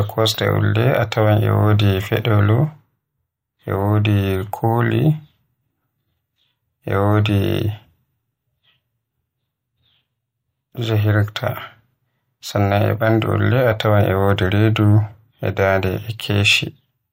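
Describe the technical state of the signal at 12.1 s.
At 12.1 s the signal is intact, with no audible fault at that point.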